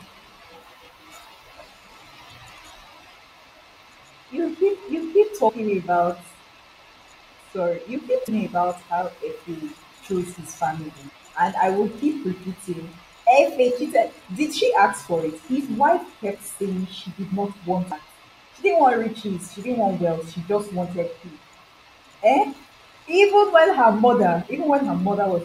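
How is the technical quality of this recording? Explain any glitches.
The speech is interrupted by four brief glitches, all from damaged data in a compressed stream. They fall at 5.48 s just after "keep you keep", at 8.27 s after "you keep", from 11.08 to 11.10 s between "chose his family" and "and I will", and at 17.90 s. Each is a short chirp, squawk, click or hole lasting about 20 ms or less. Corrupted bytes in the encoded file make the decoder misread those frames and lose sync. It then searches for the next valid frame header.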